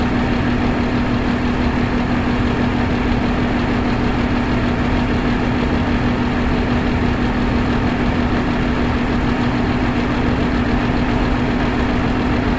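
No technical faults can be heard in this sound, which comes through a call path that carries nothing above 8 kHz.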